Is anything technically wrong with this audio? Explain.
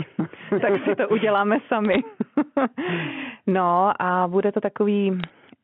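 Yes. The speech carries bit errors on a digital phone line in two short bursts. The first runs from 1.85 to 1.99 s, right after "tak si to uděláme". The second runs from 5.20 to 5.30 s, after "no a bude to". Flipped bits in the mu-law samples, a fairly low rate in the first burst and roughly double that in the second, each corrupt a single sample. The result is sharp ticks and crackle over otherwise intact speech. On the waveform these show as isolated one-sample spikes. On a spectrogram they are thin vertical lines across the whole 4 kHz telephone band. The G.711 coding underneath is heard as ordinary narrowband telephone sound, about 150 Hz to 3.4 kHz.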